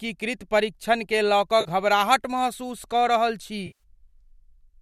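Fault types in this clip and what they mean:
AAC frame loss with concealment: bits of the coded stream dropped out, and the decoder covered each gap by reusing the last good spectrum, so you hear a smeared, noisy patch instead of a clean cut. The first, 1.61 to 1.68 s, lasts 40 ms, which fits a few short frames of the low-delay AAC this likely is. The second comes right after "महसूस कऽ रहल छी", 3.67 to 3.83 s, and at 130 ms it's a much longer gap.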